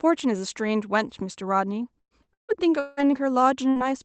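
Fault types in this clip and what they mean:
Repeated packet loss (robotic sound): From 1.99 to 3.09 s the speech turns choppy and robotic, broken by four holes, the longest 174 ms, so nearly half of that stretch is patched sound rather than real speech. Packets kept going missing or arriving late, and each hole was filled by extending the last sound, about 486 ms in all, while about 480 ms of speech was lost outright. Roughly a tenth of a second came back rougher, rebuilt from error-correction copies.
Burst of packet loss: At 3.70 to 3.79 s a brief held buzz or fading hiss stands in for the speech, and the talk resumes slightly further on with a piece missing. A short run of consecutive packets was lost or arrived too late to play. The receiver kept the last sound going for 53 ms while turning it down, and about 60 ms of the original audio never arrived and is simply absent.
Lost packet rebuilt from error correction: Overlapping the end of that, from 3.76 to 3.82 s, about 60 ms sounds grainier and noisier than its surroundings, yet there is no audible gap. 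The packet for this stretch was lost, but the following packet carried a low-bitrate backup copy of it through Opus in-band forward error correction. The decoder played that copy instead, so the words continue but with coarser coding noise than the normal 32 kbps stream around it.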